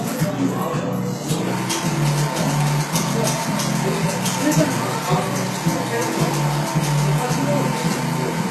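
HE-AAC compression runs throughout: nothing sounds above 12.3 kHz, and the treble, likely rebuilt by spectral band replication at a rate fitting 16 kbps, sounds plainly gritty and metallic.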